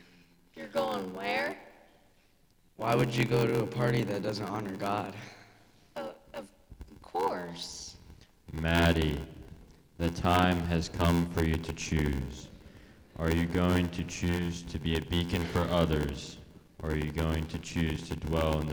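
Throughout the clip, there is a block size mismatch (padded): one stage hands over blocks shorter than the next stage reads, and the shortfall in each block is filled with silence. The buzz rate fits a 512-sample read block. Each block therefore carries a brief gap, heard as a steady buzz at 86.1 Hz. The sound also plays at 0.861 times its normal speed, dragging slower while staying at about its original pitch.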